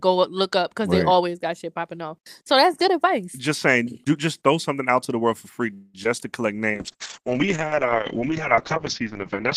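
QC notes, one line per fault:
5.73 to 5.96 s, call audio freeze: likely delayed packets emptied the jitter buffer after "the world for free", so a fading buzz fills about 0.2 s before audio resumes intact.
6.04 to 6.07 s, short concealed packet loss: roughly 20 ms never reached the decoder before "to collect"; the receiver patched it by extending the last sound, leaving a brief smear.
6.72 to 9.57 s, call bitrate drop: after "to collect" the encoder fell from 40 to 7 kbps and narrowed bandwidth from 20 kHz to 8 kHz, so the speech turns coarse and muffled.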